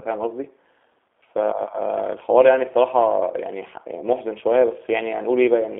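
Speech passed through a G.729 codec for the whole clip. It is band-limited to roughly 300 Hz to 3.6 kHz and has a rough, buzzy, synthetic texture, which fits 8 kbit/s G.729A rebuilding each frame from a filter and a few pulses. Plain telephone filtering would narrow the band without that roughness.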